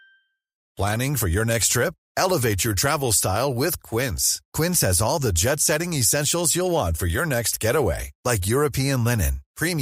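No technical faults can be heard anywhere in the recording, and the speech signal stays continuous and steady throughout.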